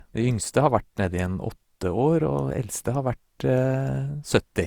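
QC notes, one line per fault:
Throughout, generation loss: the speech sounds swirly, hollow and smeared, and consonant attacks blur more than a single Opus pass at around 64 kbit/s would explain. Likely it was re-encoded about five times, each pass stacking fresh quantisation noise onto the last.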